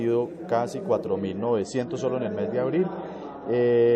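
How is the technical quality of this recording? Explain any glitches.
Quality drops partway through. From 1.07 s to the end, an adaptive stream at a lower bitrate takes over. The connection slowed, so a leaner encode played without any gap. Nothing sounds above 8.3 kHz, and artefacts rise, which fits roughly 31 kbit/s MP3.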